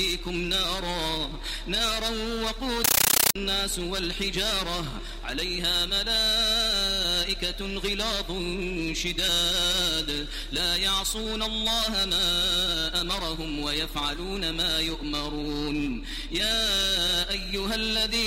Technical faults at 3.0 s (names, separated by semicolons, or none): compressed stream played as audio